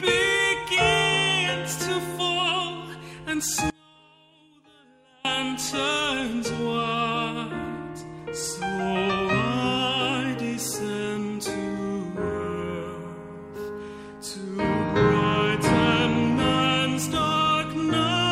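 At 3.70 s the sound drops abruptly to a faint residue, about 30 dB below its normal level, and returns just as suddenly at 5.25 s, a gap of roughly 1.5 s. This audio dropout likely came from a break in the signal path while the downstream chain stayed live, and the hard edges make it unlike a natural pause or fade.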